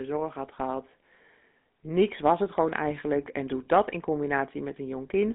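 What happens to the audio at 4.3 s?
At 4.3 s, as across the whole clip, the speech passes through a GSM full-rate codec, whose damage fits a 13 kbps stream. It rebuilds the voice from a vocal-tract model fed by sparse, evenly spaced pulses within a 200 Hz to 3.6 kHz band, leaving a plainly audible buzzy, gravelly roughness.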